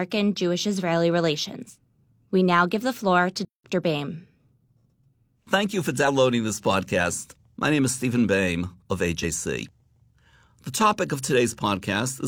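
At 3.45 s the player most likely ran short of data or had its output thread held up, so nothing reached the output until it caught up. This playback stall cuts the speech off mid-flow with about 0.19 s of silence, ending at 3.64 s, before the sound resumes.

From 6.04 to 6.08 s and again from 9.20 to 9.25 s, damaged data in the compressed stream leaves the decoder unable to read its frames. It loses sync and hunts for the next valid frame header, and each of these brief spans comes out as a chirp, squawk, click or short hole breaking into the speech.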